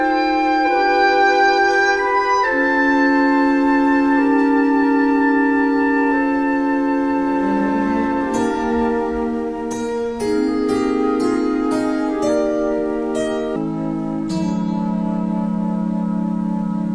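From 13.56 s to the end, the sound suddenly drops in pitch by about 6.45 semitones and drags to roughly 0.69 of its proper speed, turning low, heavy and slowed. This is a wrong sample rate fault: the samples are clocked out more slowly than they were captured, with no conversion, so pitch and tempo fall together by the same ratio. That ratio fits audio recorded at 32 kHz being played back at 22 kHz.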